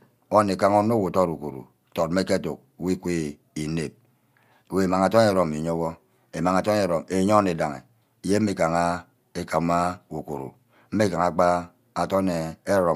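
No technical faults can be heard anywhere in the recording, and the signal holds steady throughout.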